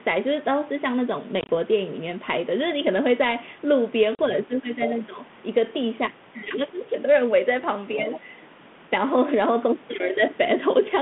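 Packet loss on an ADPCM call hits from 1.41 to 1.50 s. About 60 ms of gaps are scattered over 80 ms, and the longest run is 20 ms, which fits roughly seven short packets dropping. The decoder's predictor loses step, so the speech stutters through hard-edged holes. A second loss at 4.15 to 4.20 s leaves a 40 ms silent hole, roughly four packets, before the speech returns unevenly.

Speech suppressed in double talk follows from 4.44 to 4.78 s. The echo canceller likely mistook simultaneous talking for echo and turned the talker down, by roughly 15 dB at the deepest, over about 200 ms. The other side's voice leaking through appears at 4.82 to 4.97 s, a second voice about 15 dB under the main speech. Suppression returns at 5.07 to 5.18 s, dipping about 10 dB for roughly 100 ms. The leak recurs from 7.97 to 8.20 s at a similar level.

Throughout, the G.726 ADPCM link at 32 kbit/s holds the sound to a 150 Hz to 3.5 kHz telephone band, with light coding grain.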